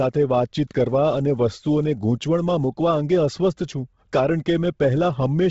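From start to finish, the speech has a breathy, grainy sheen and nothing above about 7.7 kHz, so it sounds both dull and a bit fizzy at once. That's heavy damage, most likely from Bluetooth LC3 compression, the LE Audio codec. At a starved bitrate, which here sounds like roughly 16 kbps with 10 ms frames, it drops most of the upper spectrum and patches the gaps with noise. That noise fill is the grit you hear on the voice.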